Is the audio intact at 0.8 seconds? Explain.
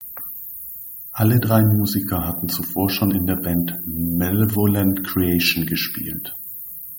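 Yes, the audio is intact at 0.8 seconds, with no audible dropout, click, distortion or other technical fault at that moment.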